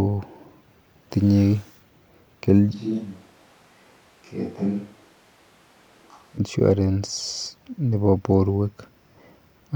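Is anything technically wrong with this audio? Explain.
Yes. From 2.75 to 6.37 s the speech suddenly goes roomy and hollow, loses its low end, drops roughly 10 dB, and picks up room noise sitting around 30 dB under the speech. That's likely a switch to a distant microphone after the close one dropped out, snapping back at the end.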